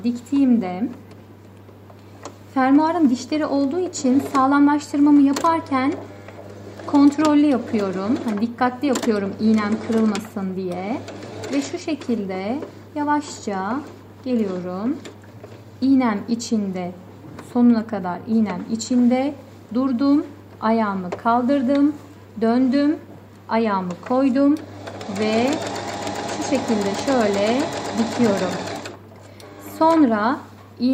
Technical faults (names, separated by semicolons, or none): none